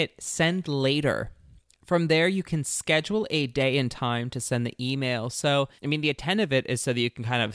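No technical faults are audible.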